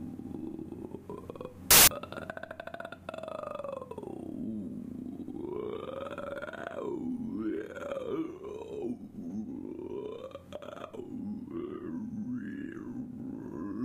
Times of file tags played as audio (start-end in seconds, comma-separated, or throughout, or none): 1.71-1.87